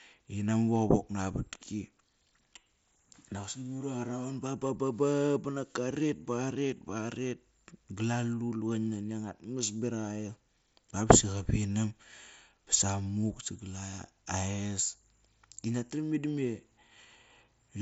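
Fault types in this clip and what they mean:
Nothing stood out on listening to this speech clip.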